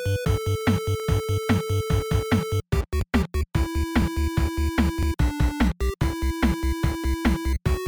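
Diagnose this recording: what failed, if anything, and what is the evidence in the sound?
Overlapping chunks at the buffer stage: a 7.07 ms segment replays at each 1-second join, giving clicks at 1.00, 2.01, 3.01, 4.02, 5.03, 6.03 and 7.04 s. These show as waveform discontinuities and thin vertical spectrogram lines.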